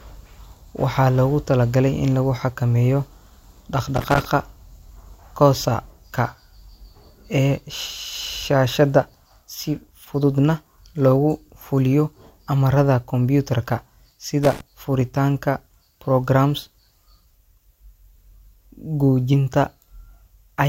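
Two short, irregular bursts of crackling and scratching break into this speech recording, from 3.96 to 4.25 s and again from 14.43 to 14.61 s. This is loose connector crackle: a worn or dirty contact flickering open and closed chops the signal, and any DC on the line adds pops.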